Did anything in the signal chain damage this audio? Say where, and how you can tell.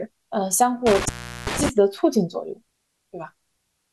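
Yes. Intermittent contact in the analogue wiring between 0.87 and 1.69 s: the speech drops out for about 381 ms in total, with crackle at each break and faint hiss underneath. A loose cable or plug was briefly opening and reclosing the signal path.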